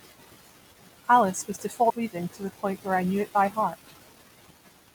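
Compressed frames skipped at 1.89 s in this speech recording, just before "reading to the point": the audio jumps forward by around 70 ms, which fits roughly three whole 24 ms codec frames being lost from the file or rejected by the decoder as corrupt. The missing stretch simply never plays.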